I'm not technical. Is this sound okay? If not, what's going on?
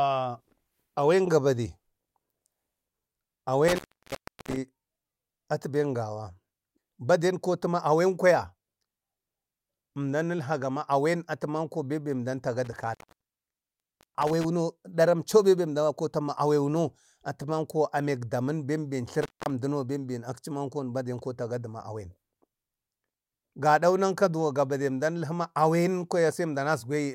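No, it has a problem called intermittent contact, which is basically a loose cable or plug briefly losing its connection. The speech drops out four times with a crackle as it cuts and returns: from 3.68 to 4.57 s, 12.65 to 14.45 s (the longest gap, about 1.2 s), 19.22 to 19.50 s, and 22.99 to 23.43 s, just before "gaɗau nanka". During each gap you hear faint hiss.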